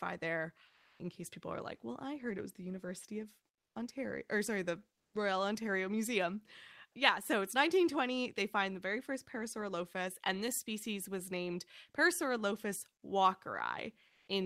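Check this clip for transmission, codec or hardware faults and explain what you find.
Two kinds of fault appear in this speech clip, both tied to silence suppression on the sending side.

Comfort noise in place of the background occurs at 0.67–0.99 s (320 ms), 3.53–3.75 s (220 ms), 4.95–5.13 s (180 ms) and 14.09–14.27 s (180 ms). The background, already faint, drops out and is replaced by a flat, featureless hiss. Its level jumps by about +3, −7, −21 and +9 dB respectively. The likely cause is discontinuous transmission, consistent with Opus DTX, where the receiver synthesises noise while the sender is idle.

Onset clipped by the voice detector occurs at 5.08–5.13 s, at the end of the third comfort-noise gap. About 50 ms of the sound's beginning is missing, so it starts abruptly, without its soft attack, straight out of synthetic noise. This likely comes from the same DTX voice detector reacting late to the return of sound, so the opening frames were never sent.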